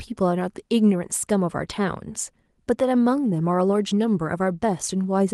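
No technical faults can be heard in this speech, which carries only the light coding texture of Opus voice compression working normally in its hybrid mode with full audio bandwidth, consistent with a rate of about 24 kbps.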